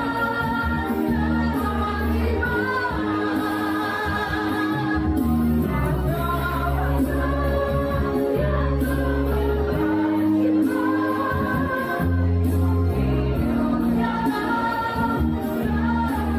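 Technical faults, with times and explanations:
No technical faults are present.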